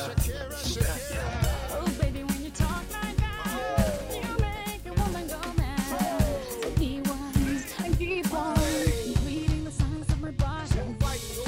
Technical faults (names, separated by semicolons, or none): none